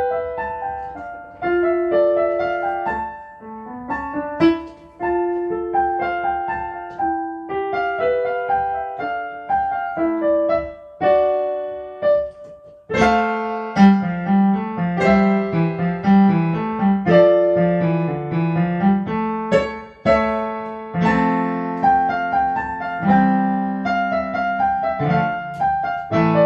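No technical faults can be heard anywhere in the audio.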